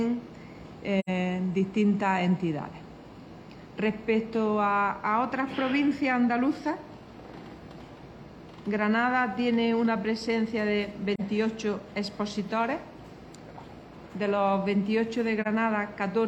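At 0.99 s the sound drops out for about 85 ms, a gap that points to two consecutive lost frames, and single-frame holes of about 43 ms follow at 11.15 s and 15.42 s. This is AAC frame loss with muting: the decoder zeroed the spectrum for the missing frames, so the overlapping windows fade the signal out and back in across roughly one frame, leaving soft-edged holes.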